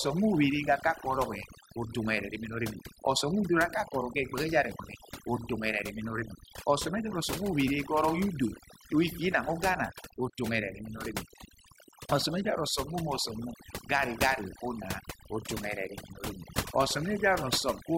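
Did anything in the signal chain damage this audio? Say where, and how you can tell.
Yes, at the call processing stage: overdone noise removal runs throughout. Background drops to near silence with twinkling specks. Quiet speech bands are gated away along with the noise.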